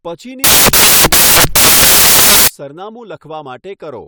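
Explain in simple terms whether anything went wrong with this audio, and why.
Between 0.44 and 2.48 seconds, the player reads each sample from the wrong bytes, gluing the pieces of each number together wrongly. The tiny, jittery details become the loudest part, so the speech turns into a loud hiss.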